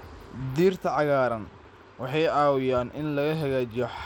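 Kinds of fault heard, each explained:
Bluetooth SBC compression: The speech sounds dull and gritty throughout, its treble flickering in and out under a grainy haze. This is likely SBC coding with a small bit pool, fitting about 96 kbps, which starves the upper sub-bands and coarsely quantises the rest.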